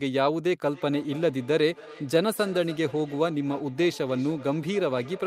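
Speech, with feedback echo between two devices from 0.68 s onward: a second device replays the audio into the microphone, returning it roughly every 0.3 s, peaking about 19 dB below the speech.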